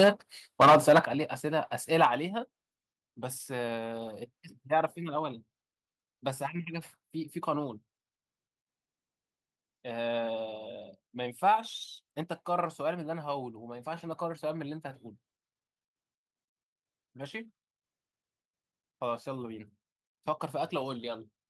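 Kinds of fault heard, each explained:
Microphone overload: the loudest moments right at the start, up to 0.09 s, and again from 0.6 to 0.99 s have a harsh, crackly edge with their peaks flattened off. That's likely the input being driven about 7 and then about 9 dB past the converter's ceiling.
Microphone volume stepped down: during the first of those crunchy bursts and just after the second, the whole level drops suddenly, by about 4 dB at 0.04 s and about 9 dB at 1.05 s. It's likely the call software catching the clipping and cutting the mic's input gain in a single step.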